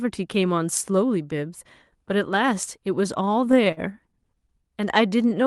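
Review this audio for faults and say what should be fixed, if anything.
Between 3.25 and 3.80 s there's a patch of repeated stalls, a proper stutter. The jitter buffer ran dry six times, and each time the receiver stretched the last sound to cover the hole. Gaps reach 50 ms, about 95 ms in all, so nothing's lost, but it drags. Giving the jitter buffer more headroom, or fixing the late, bunched packet delivery upstream, should stop it emptying like that.

From 4.81 to 5.43 s you get a jitter buffer slow-down. The buffer was rebuilding its reserve by repeating single pitch periods, adding 50 ms and running at 93% speed. The pitch stays put, but sounds come out drawn-out and a touch sluggish. Steadier packet arrival, or a buffer target that doesn't need topping up mid-stream, would keep it from having to stretch the audio this way.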